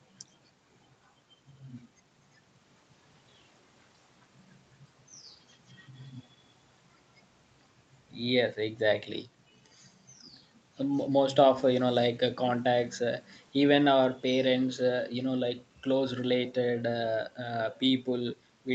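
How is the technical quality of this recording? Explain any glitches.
No glitches or faults are audible.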